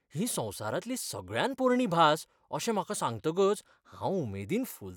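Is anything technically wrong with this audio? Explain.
No, nothing technically wrong stands out here; it's just a short bit of speech with no problems to point to.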